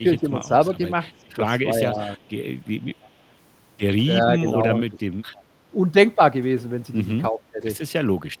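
Speech with two recurring call faults. Speech suppressed in double talk at 0.0–0.78, 1.73–2.19, 4.2–4.97 and 7.31–7.65 s: the voice dips by up to about 15 dB in pieces, likely an echo canceller ducking both sides at once. The gain drops rather than adding any copy. Echo leak at 1.85–1.99, 3.01–3.1, 4.48–4.53 and 5.34–5.43 s: faint scraps about 30 to 35 dB down return 323 ms late, likely loudspeaker pickup the canceller missed. Unlike room reverb, these are discrete delayed repeats.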